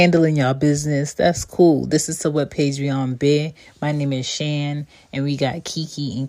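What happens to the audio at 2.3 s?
At 2.3 s the speech continues cleanly, with no dropout, click, distortion or other fault to be heard.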